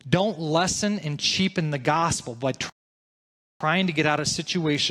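At 2.70 s the speech drops into silence and stays there until 3.61 s, a rebuffering stall. The player drained its buffer of downloaded audio and halted playback until more data arrived, inserting about 0.91 s of dead air. When sound returns it picks up at exactly the point where it stopped, with no skipped material and no repeat. The result is a clean gap that stretches the timeline rather than a dropout that removes anything.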